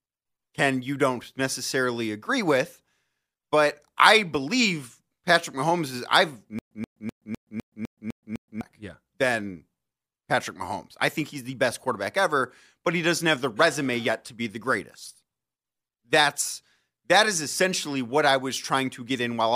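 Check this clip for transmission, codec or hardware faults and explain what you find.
One playback fault stands out. From 6.59 to 8.61 s, a stutter with silent gaps: a 129 ms fragment repeats eight times, each followed by 124 ms of silence, likely a stalled stream replaying its last buffer. Unlike a plain loop, silence separates each repeat.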